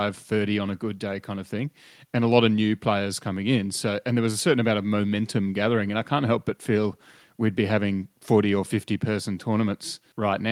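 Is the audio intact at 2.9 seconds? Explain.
Yes, the audio at 2.9 seconds is intact, with no dropout, click, distortion or other fault at that point.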